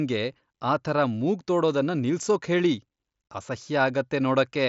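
Nothing stood out on listening to this speech, which comes over a Bluetooth mSBC headset link that carries nothing above about 7.7 kHz.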